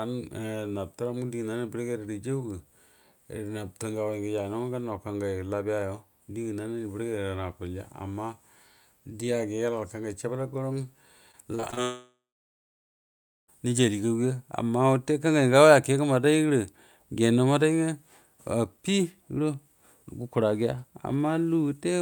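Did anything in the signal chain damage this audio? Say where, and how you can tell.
Yes, the damage is at the network stage. Repeated packet loss (robotic sound) runs from 11.31 to 11.79 s: the speech turns choppy, with five short holes, the longest 34 ms. The receiver patches each hole by stretching the last fragment of sound, so about 23% of that half-second is synthetic fill. Because the holes arrive one after another, the gaps and the concealment together produce the robotic texture.

A long network dropout follows at 11.83 s and lasts until 13.5 s. The sound first continues as a fading buzz or hiss, the receiver extending what it last heard. After that come about 1.3 s of silence, and the speech resumes with roughly 1.7 s simply gone. The likely cause is a stall in delivery: no audio reached the receiver for that stretch, and the missing part was never played back.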